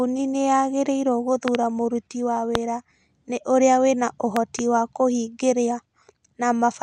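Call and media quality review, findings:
Loud pops over continuing speech at 1.48–1.57 s (double), 2.55–2.57 s (single), 4.37–4.61 s (double), roughly 15–20 dB above speech. Likely voltage transient from connector, switch or static; downstream circuitry shapes the pulse.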